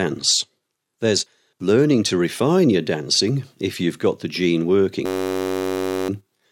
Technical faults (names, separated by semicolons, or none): system hang loop